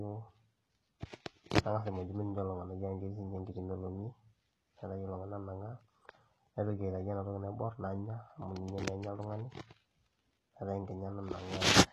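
HE-AAC compression runs throughout, and the damage is heavy. Nothing survives above 12.3 kHz, and the treble below that cut-off sounds synthetic rather than captured. The likely cause is spectral band replication: only the lower spectrum is coded, and the upper bands are rebuilt by copying lower content upward under a coarse envelope. Harmonics fail to line up across the join, so s sounds come out gritty and metallic, which fits a very low bitrate of around 16 kbps.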